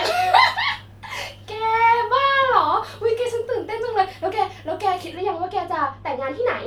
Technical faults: de-emphasis applied wrongly

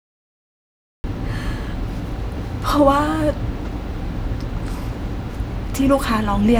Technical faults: cut-off start

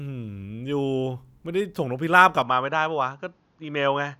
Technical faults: input switched to a poorer device

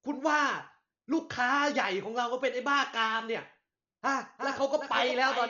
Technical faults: Dolby Digital compression; doubled audio track

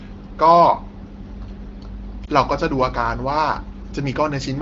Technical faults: lost AMR speech frames

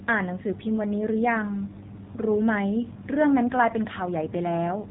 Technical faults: AMR narrowband mobile codec

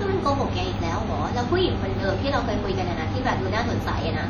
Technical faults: WMA compression

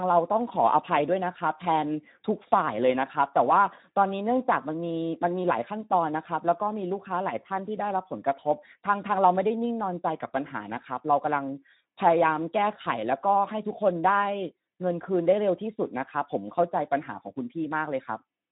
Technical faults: Speex codec

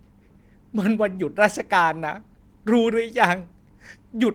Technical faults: clock drift between sender and receiver; repeated timing corrections

